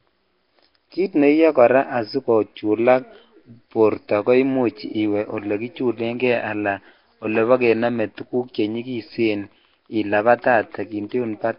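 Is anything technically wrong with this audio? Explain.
Yes, the whole clip has the signature of heavy Nellymoser compression, likely from Flash's old Nellymoser Asao mic codec. The speech carries a rough, hissy halo and a smeared, underwater feel, and nothing comes through above about 5.3 kHz. That codec packs fixed-size blocks into very few bits, starves the weaker bands, and fills them with noise instead, so the damage level fits a stream of roughly 22 kbps.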